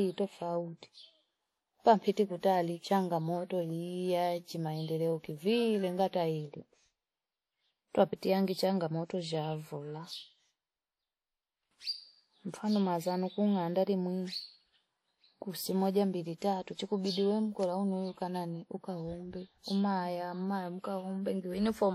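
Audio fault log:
throughout, WMA compression: the speech carries a plainly audible ringing, washy smear and a hiss that swells and fades with the signal, with nothing above 16.8 kHz, likely from long-block transform coding at a low bitrate near 48 kbps. Unlike steady background noise, this hiss tracks the speech.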